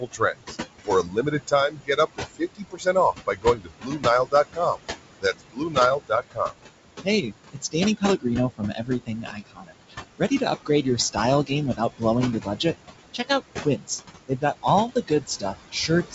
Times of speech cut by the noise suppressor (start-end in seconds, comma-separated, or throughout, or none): 0.00-4.79, 5.21-6.55, 7.04-12.03, 12.40-12.74, 13.14-13.90, 14.28-16.14